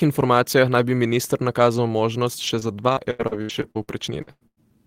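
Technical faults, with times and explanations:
2.47–4.59 s, repeated packet loss (robotic sound): after "bi minister nakazal možnost" the speech turns choppy, as eleven lost stretches up to 98 ms are patched by extending the previous sound.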